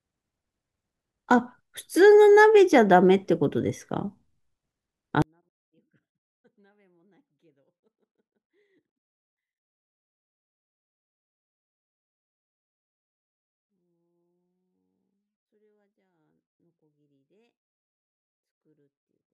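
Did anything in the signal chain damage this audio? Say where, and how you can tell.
Yes. From 5.22 s to the end, the speech drops by about 48 dB in a single step and becomes almost inaudible, yet what remains is clean. That points to a 24-bit alignment error (too quiet) at the sample-format conversion stage: 24-bit samples sitting in the low bytes of a 32-bit word were read as full 32-bit integers, shifting everything down eight bits. A fader move or dropout wouldn't give this exact, instantaneous, distortion-free 48 dB loss.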